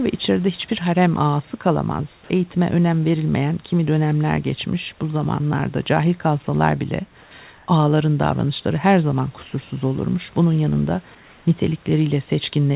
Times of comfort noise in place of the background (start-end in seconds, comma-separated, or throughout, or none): 7.22-7.67, 11.15-11.45